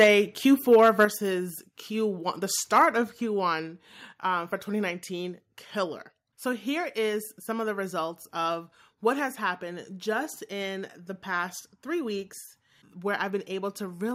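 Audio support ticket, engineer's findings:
Harsh crackle and flattened tops on the loudest syllables at 0.00–0.08 s, 0.72–1.04 s and 2.75–2.82 s, peaks pushed roughly 6, 3 and 2 dB past the converter's limit. Microphone overload, likely input gain set too high, so the converter clips the peaks.

Sudden drop in voice and background level at 0.04 s, 1.05 s and 3.09 s, each during or shortly after a clipped stretch. Microphone volume stepped down, likely by call software reacting to the clipping, cutting input by about 3, 6 and 4 dB.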